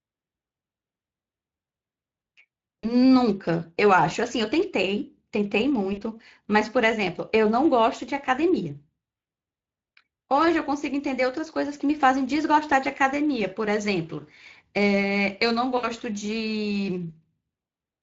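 The whole recording carries the sound of the Speex codec, with plainly audible coding damage. Speex is a CELP coder that models the vocal tract with a filter and spends its remaining bits on the excitation signal. Here that excitation is coarse, so the speech has a noisy, hoarse edge. The degree of damage fits a middle setting of around 20 kbps.

At 2.80 to 2.88 s and again at 5.93 to 6.03 s, VoIP packet loss concealed by the speech codec briefly smears the speech. Each gap fits two lost 20 ms frames. The decoder fills the hole by repeating its last pitch and filter at falling gain, which turns the speech into a short buzzy tone or coloured noise that fades. A third dropout at 15.77 to 15.89 s fits three lost frames and lasts longer. In each case the speech stays weak and distorted for a few tens of milliseconds after the packets resume, because each decoded frame builds on the state of the previous one.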